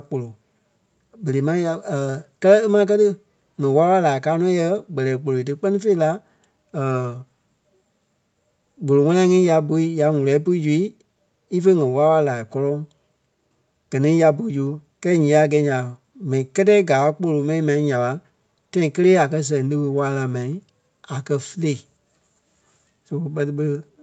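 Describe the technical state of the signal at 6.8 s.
At 6.8 s the speech is intact, with nothing going wrong beyond the normal call chain, whose microphone processing and Opus coding leave the sound band-limited to about 8 kHz.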